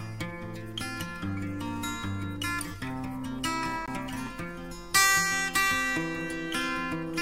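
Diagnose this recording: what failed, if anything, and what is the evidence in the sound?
A CD skip at 3.86 s points to the playback stage, specifically the disc transport. The sound mutes for roughly 15 ms and then resumes from a different place in the material, because the laser lost its track and landed on another turn of the disc's spiral, forward or back. A buffer underrun would leave a gap but carry on from where it stopped. Here, the continuity breaks.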